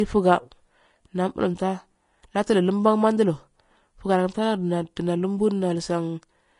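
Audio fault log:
Throughout: Vorbis compression, likely. The speech sounds hissy and grainy, and nothing is left above 10.5 kHz. Fine treble detail has turned into noise of similar energy. This fits a low bitrate around 34 kbps. Tones sound roughened and attacks blurred.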